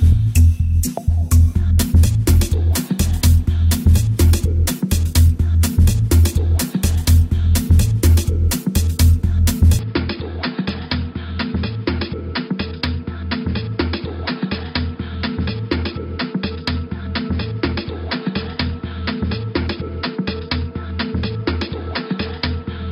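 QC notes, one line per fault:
9.79 s to end: input switched to a poorer device. With no gap at the change, the sound abruptly turns dull and narrow, with nothing above 5.1 kHz. It also drops roughly 10 dB in level and gains a faint new noise floor. The likely cause is a switch to a band-limited microphone or headset call profile.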